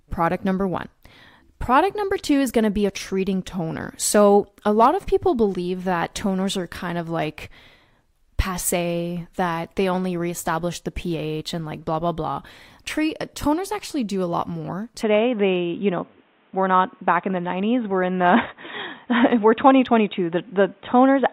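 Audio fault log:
15.02–21.32 s, input switched to a poorer device: Right after "do a lot more", the speech turns dull and boxy and stays that way to the end. Nothing is heard above about 3.8 kHz, so the upper consonant detail is gone. A new faint noise floor appears, well below the speech. There is no gap at the change, and loudness holds steady. The likely cause is the recording input moving to a narrower-band microphone or headset profile.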